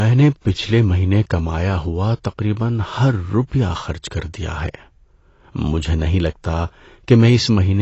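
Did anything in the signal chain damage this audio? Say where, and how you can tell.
Yes, at the codec stage, throughout the speech. Nothing reaches above 8 kHz, the top end sounds dull and smeared, and sustained sounds and sibilants carry a warbling, fizzy texture. The likely cause is AAC compression, with the cut-off and roughness pointing to AAC-LC at a low rate near 24 kbps. The encoder starves high bands of bits and leaves gaps or noise fill. A plain low-pass filter or resampling would remove the top cleanly without the warble.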